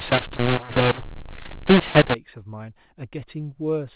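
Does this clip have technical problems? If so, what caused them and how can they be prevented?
Yes. From 0.0 to 2.14 s the speech is harsh and distorted, with hiss filling the gaps. It's a mu-law and A-law mix-up: mu-law telephone audio was decoded as A-law, scrambling levels and lifting quiet samples above silence. Labelling the G.711 law explicitly and checking it at the decoder prevents this.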